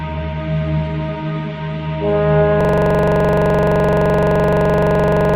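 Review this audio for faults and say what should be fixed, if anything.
At 2.61 s the audio locks into a system hang loop and stays stuck to the end: the same 42.67 ms slice repeats dozens of times at 23.4 Hz, giving a machine-gun stutter, which fits a 2048-sample ring buffer replaying while the driver froze. To prevent it, have the audio driver detect a stalled buffer and output silence rather than replaying stale data.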